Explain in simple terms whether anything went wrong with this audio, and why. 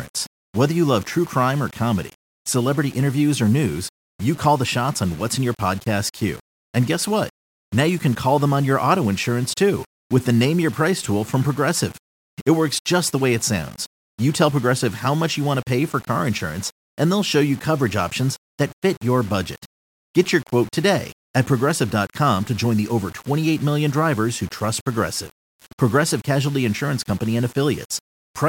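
Something did go wrong, and it lasts the whole clip. The speech sounds grainy and rough, and the grit rises and falls with the voice. Quiet parts sputter or drop to silence between words. The likely cause is low bit depth without dither. The sound was stored with too few loudness steps, roughly six bits' worth, and each value was simply rounded. That rounding error follows the voice, so it sounds like distortion rather than a steady hiss.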